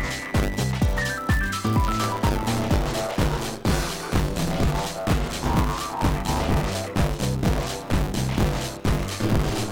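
Right from the start and all the way through, there's buffer tearing: a steady robotic rattle at 100 Hz that only shows up when there's signal. The writer and reader of the ring buffer have drifted, so they cross every period. Something like two-fifths of each chunk is stale audio from around 30 ms earlier, spliced in with hard joins on both sides, and those repeating seams are what you hear as the buzz.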